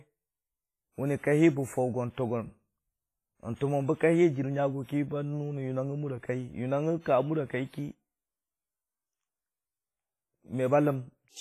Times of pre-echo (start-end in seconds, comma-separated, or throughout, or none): 3.55-3.61, 4.83-4.89, 7.00-7.06